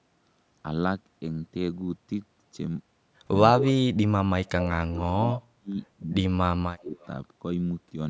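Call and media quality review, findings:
Speech suppressed in double talk: talker dips hard from 3.67 to 5.33 s, roughly 1.5 s chewed up, down about 35 dB at worst. Likely the echo canceller couldn't split near talk from loudspeaker echo and ducked everything. More dropouts at 5.55–5.78 s (about 40 dB), 5.96–6.14 s (about 20 dB) and 6.47–6.96 s (about 30 dB), each gouging chunks out while the far side talks over it.

Echo leak: short delayed copies of the far side come back at 4.63–4.68 s (about 15 dB under speech), 5.32–5.42 s (about 10 dB under, the most obvious one) and 6.96–7.08 s (about 30 dB under, faint). They trail the original by a steady ~0.2 s. Likely a loudspeaker-side canceller not fully removing what its mic picked up, so leftover scraps get sent back.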